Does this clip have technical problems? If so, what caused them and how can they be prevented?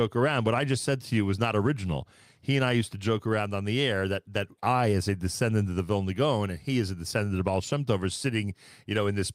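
No technical faults are audible.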